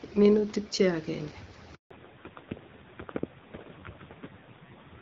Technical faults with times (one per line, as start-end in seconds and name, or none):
1.75-1.91 handover gap
1.91-5.01 fallback to narrowband